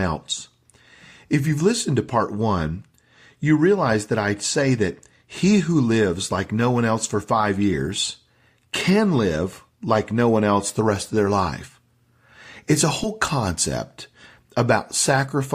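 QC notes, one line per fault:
13.03–13.07 s, compressed frames skipped: the decoder never played a block of the compressed stream, either because it was missing from the file or because it was rejected as damaged. The speech jumps ahead by about one frame, which fits a 20 ms frame length, so roughly that much audio is lost.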